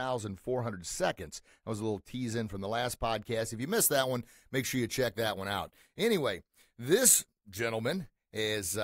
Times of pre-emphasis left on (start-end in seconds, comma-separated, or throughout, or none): 3.62-8.83